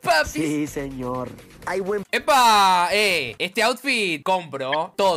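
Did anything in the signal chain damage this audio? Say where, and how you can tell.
Yes, and it's at the codec stage. Right near the end, from 4.72 to 4.75 s, there's a short burst of about 26 ms, peaking at roughly -10 dBFS. That's a corrupt frame decoded: flipped bits in a few compressed frames, around three, were played straight through, so misread codes and gains dumped energy into the wrong frequencies for just those frames.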